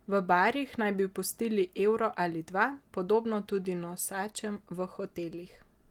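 Nothing here counts as a fault, just speech carried through Opus voice compression with its full top end still there and only the light touch you'd expect from that codec.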